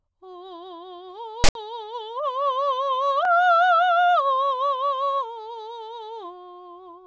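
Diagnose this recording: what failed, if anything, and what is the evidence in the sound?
Storage and file parsing failed. From 1.44 to 1.55 s the music drops out for a hard-edged burst of file tags played as audio. A loud, lopsided rasp comes from tag text being read as samples. Then zero padding gives dead silence.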